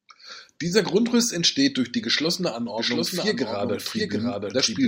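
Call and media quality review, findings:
Doubled audio track from 2.78 s to end, just after "entsteht durch die geschlossene": speech heard twice, second copy trailing by roughly 0.7 s, a few dB quieter, dry, no room tail, abrupt onset. Likely a second capture path or an edit layering an offset duplicate.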